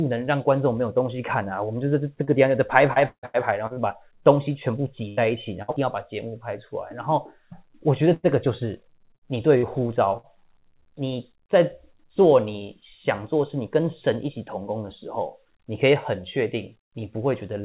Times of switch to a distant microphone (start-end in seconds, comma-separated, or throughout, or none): none